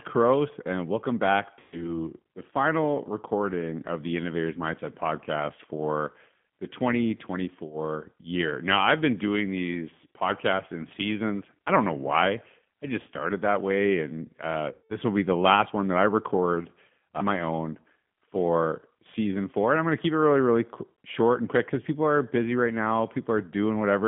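Speech throughout sounds narrow, slightly rough and synthetic, confined to a telephone band of roughly 150 Hz to 3.4 kHz, with the codec damage plainly audible. This is the G.729 codec, here the G.729A variant, whose character fits its 8 kbit/s rate. Rather than storing the waveform, it resynthesises each short frame from a vocal tract filter, a pitch predictor and a handful of pulses, which leaves that buzzy, artificial texture. Twice the speech smears into a buzzy tone or coloured noise that fades. The first is from 1.60 to 1.85 s, between "and welcome back" and "the final recording of". The second is from 14.72 to 14.95 s, between "that way and uh" and "will be the last". This is VoIP packet loss concealed by the speech codec. When packets went missing, about 120 ms of audio in the first gap and 180 ms in the second, the decoder kept extending its last pitch and filter at falling gain. 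Because each frame builds on the one before, the voice stays weakened briefly after the packets resume.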